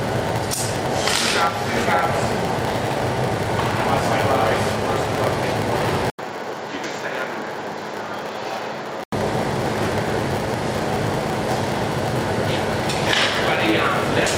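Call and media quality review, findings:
Block size mismatch (padded), whole clip. Steady 100 Hz buzz from zero-filled gaps between blocks. Audio runs slow, about 0.92 speed, timbre roughly unchanged.

Input switched to a poorer device, likely, 6.1 to 9.12 s. 80 ms silence at switch. Narrower band, level down about 5 dB, new noise floor.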